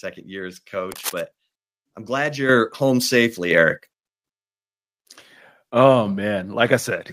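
From 0.89 to 1.21 s, cable scratch noise appears: dense, ragged rustling, only slightly quieter than the speech. A worn cable or connector being moved is the likely cause.

Microphone volume stepped up at 2.49 s by about 8 dB, then at 3.51 s and 7.08 s by about 4 dB each. Speech and background jump louder together each time.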